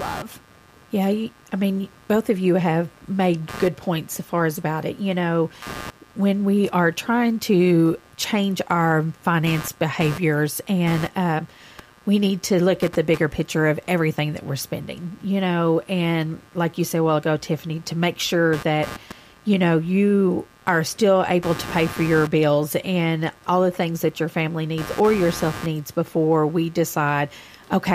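Throughout the speech, computer activity noise adds a buzzing pulse near 100 per second, roughly 20 dB below the voice, as processor load disturbs the shared audio ground.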